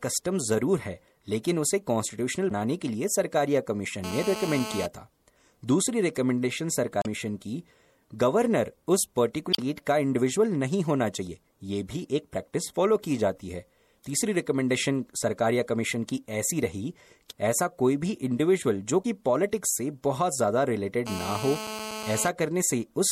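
A speech recording, likely squeezed through low-bitrate MP3 compression (the damage fits around 64 kbps), has dulled treble and a watery, swirling texture throughout. Damaged data in the compressed stream makes the decoder lose sync and skip ahead, producing short chirps or blips at 2.47–2.52 s, 6.99–7.06 s, 9.50–9.60 s and 19.01–19.06 s. A nearby 2G phone on a call causes GSM phone buzz: its 217 Hz transmit bursts are rectified into a steady, raspy buzz about 9 dB below the speech at 4.04–4.86 s and 21.07–22.29 s.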